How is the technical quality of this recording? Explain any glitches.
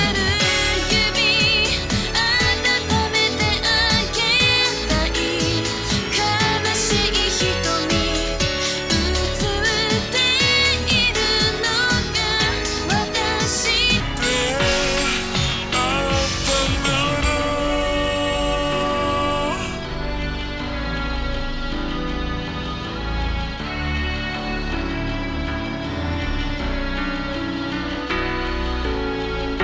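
The recording has one clear fault: from 14.00 s to the end, the second half plays at the wrong sample rate. Everything runs at about two-thirds speed, and the pitch drops about 7 semitones. That ratio fits audio captured at 24 kHz being played back at 16 kHz with no conversion. The sound turns low, slow and dragging. Pitch and tempo fall together, which separates it from a pitch shift or a time-stretch, where one changes without the other.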